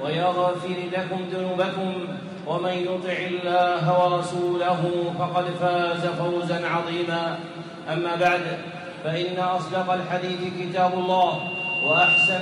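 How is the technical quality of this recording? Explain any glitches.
There's one real problem, and it's right at the end. From 10.92 s to the close, a loudspeaker feedback squeal takes over. A mic is picking up the speaker it feeds, and at 2.8 kHz the loop gain goes past one. That tone swells over roughly a second until it sits about 5 dB above the rest of the sound.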